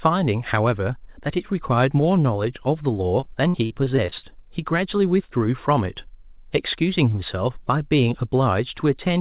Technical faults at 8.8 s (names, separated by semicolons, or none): none